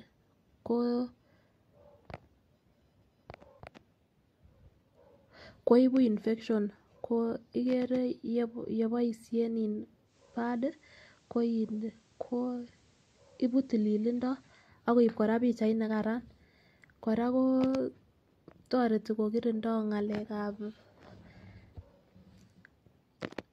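Speech with digital radio blending to analogue from 10.04 to 14.72 s: a 132 ms cross-fade hands over to FM, dropping about 1 dB. Hiss some 35 dB down arrives with the analogue band, unlike a plain filter change.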